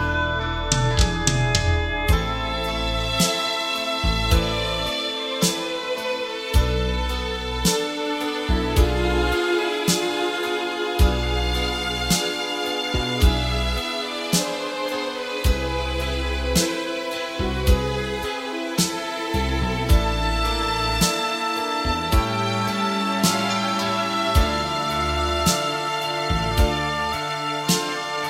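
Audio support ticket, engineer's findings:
Speaker-to-mic loop likely sitting at the edge of feedback, holding one frequency ringing without building up. Feedback whistle: thin steady tone near 3.5 kHz, roughly 15 dB under the programme, swelling and fading slowly in level, 0.00–13.57 s.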